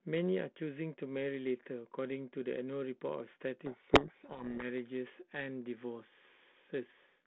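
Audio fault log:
3.66–4.64 s, codec payload misread: the speech drowns in harsh distortion because the decoder reads the G.726 code words with their bit order reversed.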